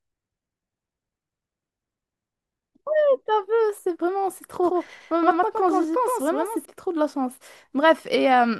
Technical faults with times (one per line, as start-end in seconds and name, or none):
4.63-6.65 doubled audio track